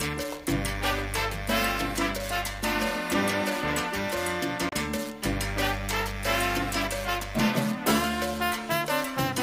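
At 4.69 to 4.73 s, damaged data in the compressed stream makes the decoder lose frame sync, giving a brief chirp, squawk, click or short hole.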